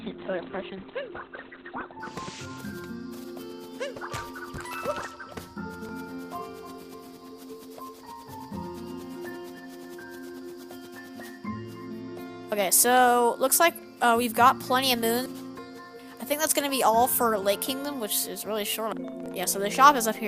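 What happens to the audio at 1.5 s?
At 1.5 s the audio is still in an adaptive stream starting at a low bitrate, a stretch running from 0.0 to 2.0 s. The player begins on a cheap, fast-loading version of the stream before switching up once it has gauged the connection. Here nothing reaches above 4.2 kHz, so the sound is dull and muffled with heavier coding artefacts, which fits roughly 12 kbit/s Opus. At 2.0 s it jumps abruptly to fuller quality without any gap.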